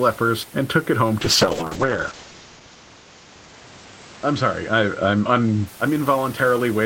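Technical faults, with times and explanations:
1.21 to 5.73 s, call bitrate drop: the bitrate falls from 32 to 8 kbps. At the low rate the encoder codes more coarsely and also narrows the band from 20 kHz to 8 kHz, so the speech sounds muffled and rough.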